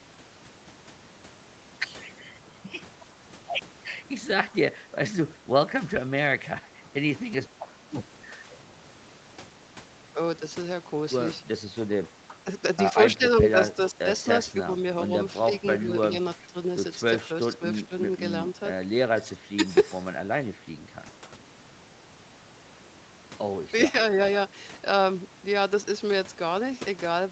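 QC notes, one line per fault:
4.82–4.89 s, 6.41–8.45 s, 12.28–14.55 s, 15.48–18.22 s, 19.15–19.62 s: speech suppressed in double talk. The echo canceller likely could not separate this side's talk from the loudspeaker echo and turned the voice down in short pieces, dips of about 5 to 15 dB.
15.79–16.47 s: echo leak. Loudspeaker pickup likely got past the echo canceller, leaving a faint copy of the voice about 25 dB down, trailing by 387 ms.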